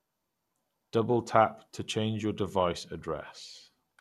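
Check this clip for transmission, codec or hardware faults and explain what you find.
There is one fault, present throughout the speech: MP2 compression. The audio sounds dull, with nothing above 12.1 kHz, and carries a gurgling, granular roughness. The likely cause is MPEG Layer II coding at a starved rate, which fits roughly 80 kbps. Its 32 sub-bands are shut off at the top and coarsely quantised below. The flickering bands and grainy texture set it apart from a clean low-pass filter, which dulls the sound without adding grit.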